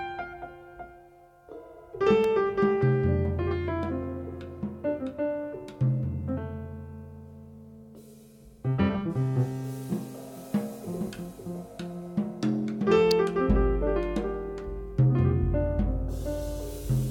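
Electrical switching spikes appear at 2.24 s and 13.11 s as sharp snaps over the sound, the second louder, likely a nearby switch arcing into the line.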